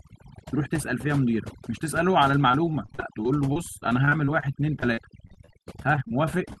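Overdone noise removal runs throughout. The suppressor was set too aggressively, so frequency bands near its noise estimate are pulled down or cut off entirely, taking quieter parts of the speech with them. The background sits near silence with twinkling specks.

Repeated packet loss (robotic sound) occurs from 2.51 to 4.44 s and again from 4.80 to 6.12 s. Each stretch contains a dense run of short dropouts, the longest about 36 ms and 33 ms respectively. Each hole is patched by extending the preceding sound, so the speech turns choppy, with fragments missing.

A short stall from a late packet follows at 6.53 to 6.58 s. The jitter buffer ran dry, and the last sound was held for about 29 ms until the data arrived. Playback then resumed where it had stopped, so nothing is lost, but one sound drags with a slight buzz or dip.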